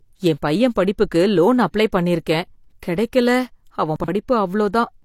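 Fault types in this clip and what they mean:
chunks out of order: from 3.96 to 4.08 s a 40 ms chunk plays two chunks late. Nothing is lost, but three hard joins create a jumbled moment.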